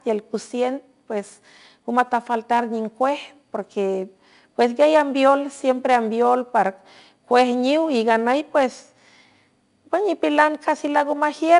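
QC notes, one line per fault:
Throughout: 4-bit ADPCM compression, plainly audible as gritty hiss riding on every loud stretch of speech and roughness on sharp onsets where the adaptive step lags. Nothing above 10.7 kHz, and the coarse grain fits a bitrate near 89 kbps.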